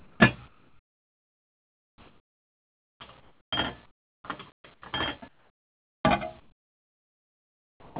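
Comfort noise in place of the background fills the gaps between sounds in six stretches: 0.00–0.20 s, 0.48–3.52 s, 3.86–4.24 s, 4.52–4.82 s, 5.28–6.04 s and 6.40–7.96 s. The real ambience gives way to a smooth, featureless hiss, likely because the sender stopped transmitting during silence and the receiver synthesised noise in its place. Where it can be measured, the level falls by about 8 dB at the start, about 19 dB at 3.86 s, about 12 dB at 5.28 s and about 13 dB at 6.40 s. On a spectrogram these spans look like flat, uniform noise, with none of the texture of real background. The waveform shows a low, even band at each one.

An onset clipped by the voice detector occurs at 0.17–0.20 s (30 ms lost) and at 7.91–7.96 s (50 ms lost). The detector was likely slow to register that sound had resumed, so the first moments were replaced with synthetic noise. Each sound begins abruptly, without its gentle attack. 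On the waveform the envelope jumps straight up from the noise floor. The spectrogram shows a hard vertical edge where a soft ramp should be. All the energy in the clip stops at 4 kHz, which fits a G.711 narrowband call path.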